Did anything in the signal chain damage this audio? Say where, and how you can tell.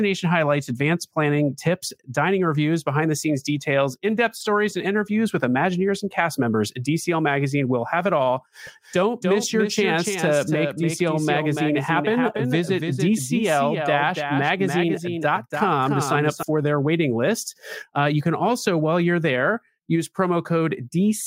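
Yes. Doubled audio track, 8.67 to 16.43 s. A dry copy trails around 300 ms, about 5 dB quieter, starting and stopping abruptly. Likely a slower second capture path.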